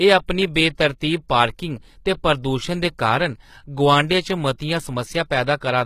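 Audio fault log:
throughout, HE-AAC compression: treble likely rebuilt from copied lower bands at about 20 kbps, so s sounds turn plainly gritty, metallic or lispy, with nothing above 14.9 kHz.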